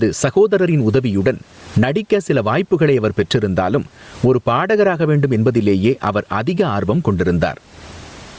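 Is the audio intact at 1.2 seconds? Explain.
No. At 1.2 seconds the speech is affected by two faults that run through the whole clip. The first is gain pumping: the level swings by around 25 dB, and the room noise sits about 44 dB below the speech. This is likely an input gain set far too high, with a fast limiter pulling it down.

The second is Bluetooth LC3 compression. The speech has a plainly audible breathy, grainy edge because the upper spectrum is thinned and filled with noise in 10 ms frames. That level of damage fits a bitrate near 32 kbps. Separately, the call microphone processing limits the band to 8 kHz.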